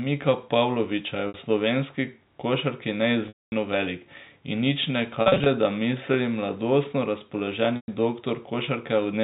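Speech over a G.711 telephone line suffers packet loss with pitch repetition: the receiver repeats the last pitch period at 1.28 s (60 ms), 3.28–3.52 s (240 ms, fading to silence), 5.22–5.46 s (scattered brief gaps) and 7.76–7.88 s (120 ms), giving held, buzzy patches.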